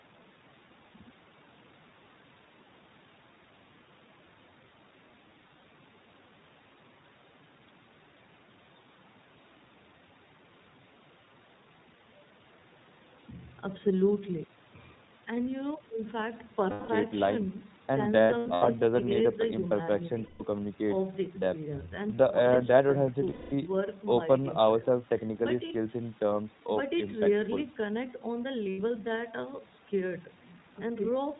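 Throughout, the speech carries the iLBC codec. Nothing above 4 kHz survives, and the voice sounds thin, rough and slightly synthetic. That damage is plainly audible. It fits iLBC's 20 ms frames at about 15 kbps.

Lost iLBC frames then break in six times. At 5.40 to 5.64 s, short gaps of about 20 ms each are scattered, adding up to 100 ms. Solid gaps follow at 16.70 to 16.90 s, lasting 180 ms. From 18.22 to 18.68 s, losses totalling 280 ms are spread out, the longest around 70 ms. Further solid gaps come at 20.24 to 20.42 s (160 ms), 23.30 to 23.53 s (220 ms) and 28.70 to 28.79 s (80 ms). In each gap the decoder repeats the last pitch cycle with added noise. It is heard as a held, buzzy vowel. The voice returns almost immediately.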